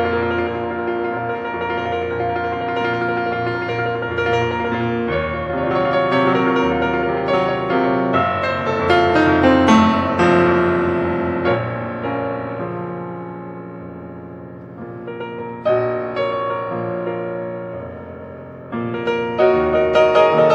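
No technical faults can be heard anywhere in this recording.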